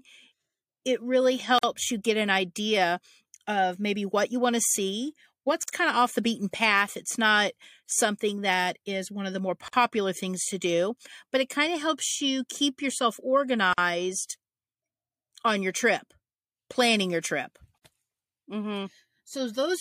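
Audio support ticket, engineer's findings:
Gap at a join of encoded pieces, 1.59, 5.63, 9.68, 13.73 and 17.78 s, every 4.0 s: speech drops to silence for about 49 ms, edges smeared by the codec, then resumes where it stopped. At 5.63 s between "want to see what's" and "kind of off the"; also after "helps you keep yourself" and "trip planning your trip". Probable component: segment concatenation. Chunks were encoded separately and joined untrimmed, so each encoder's start delay and last-frame padding remain as silence.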